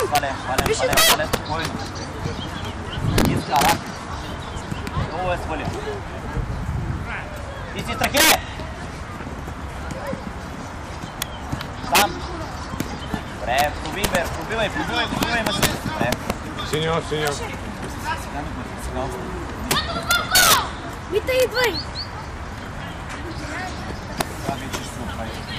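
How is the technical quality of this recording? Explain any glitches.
Technical quality is poor because of integer overflow running through the whole recording. Its gain stage drives the signal about 8 dB past the integer ceiling. Instead of being held at the limit, each overshooting sample wraps around to the opposite extreme of the range. Well under one percent of samples are affected, but every loud peak produces a sudden full-scale jump, heard as harsh, violent cracks far sharper than ordinary clipping.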